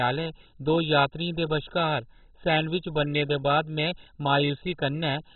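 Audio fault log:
throughout, MP2 compression: the speech is dull, with nothing above 4.1 kHz, and a heavy gurgling, granular roughness runs through every phrase. This is likely MPEG Layer II coding starved of bits. The coder divides the spectrum into 32 equal sub-bands and, short of bits, shuts off all the upper ones entirely. The few bands left carry coarsely quantised, flickering content, a degree of damage that points to a very low bitrate near 16 kbps.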